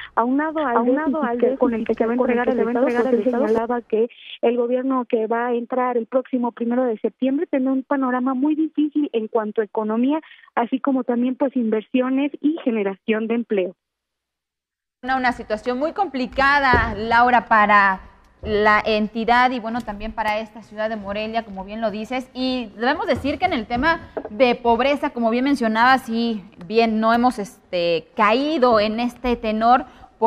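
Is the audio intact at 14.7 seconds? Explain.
Yes, the audio is intact at 14.7 seconds, with no dropout, click, distortion or other fault at that moment.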